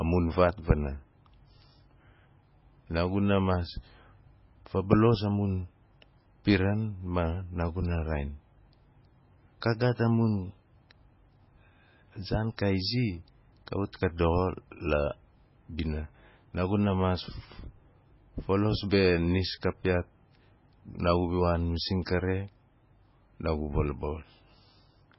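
From start to finish the speech has a hard ceiling, with nothing above about 5.6 kHz, and a heavy watery, swirling texture where quiet detail flickers in and out and s sounds turn metallic. That is likely MP3 compression starved of bits, consistent with a rate near 16 kbps, so the encoder cut the treble and dropped weak frequency lines frame by frame. A plain low-pass filter would dull the top but leave no warbling.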